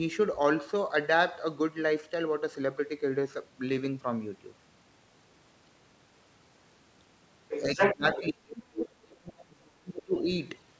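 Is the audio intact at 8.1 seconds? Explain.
No. Around 8.1 s the far end was talking at the same time, and the echo canceller likely could not tell the near talker from the loudspeaker echo, so it turned both down. This is speech suppressed in double talk, spanning 7.75 to 10.3 s. The talker's speech sinks in level, dipping by as much as about 35 dB at its deepest and fading or breaking up for around two seconds in total.

Right at this moment, from 8.13 to 8.19 s, the other side's voice is leaking through. The far-end speech played on the talker's loudspeaker reached the microphone, and the canceller likely failed to subtract all of it. The result is a brief scrap of a second voice, roughly 10 dB below the talker's speech, lasting only about 60 ms.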